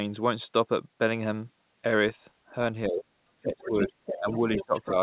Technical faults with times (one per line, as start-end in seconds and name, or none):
2.88-3.06 speech suppressed in double talk
3.41-4.27 speech suppressed in double talk
3.51-4.90 other side's voice leaking through
4.55-4.91 speech suppressed in double talk